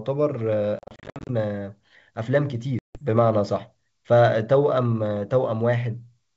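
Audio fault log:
0.79–1.30 s and 2.79–3.00 s, packet loss on an ADPCM call: lost packets become silence, first 320 ms scattered in gaps up to 60 ms, then 160 ms. The decoder's predictor and step size lose track, so speech resumes slightly distorted briefly.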